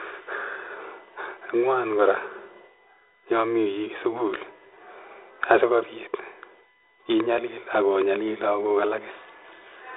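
Current drawn by the USB bus in 1 ms frames is leaking into the audio through the power or ground path, producing a USB whine that runs for the whole clip. It sits at a fixed 1 kHz with harmonics, strongest at 2 kHz, roughly 35 dB below the speech. The speech itself is confined to a telephone band of about 150 Hz to 3.7 kHz, consistent with G.726 ADPCM at 32 kbit/s.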